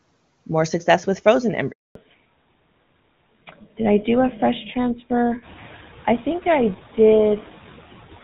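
Speech recorded over a mobile call carries noise suppressor artifacts throughout: background noise is pulled down by about 15 dB between phrases and swells back under the voice. At 1.71 s, just after "more success with frozen", a handover gap silences the audio for 240 ms until 1.95 s, as the call switches networks and no frames arrive. From 1.95 s to the end, a fallback to narrowband removes everything above 4 kHz, dulling and roughening the voice, which points to a drop from HD Voice to a legacy codec such as GSM full rate. The room noise, which rises by about 11 dB near 5.5 s, is part of the recording. The wideband section before the switch shows little or no codec damage.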